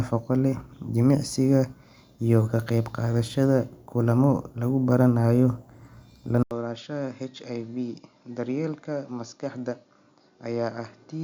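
At 6.43 s the speech cuts out for about 80 ms, then returns duller and noticeably quieter, roughly 10 dB down, with nothing above 7 kHz and a faint new background noise well below the voice. It stays this way until the end. The likely cause is an input switched to a poorer device partway through recording, a narrower-band microphone or headset path with its own gain, tone and noise floor.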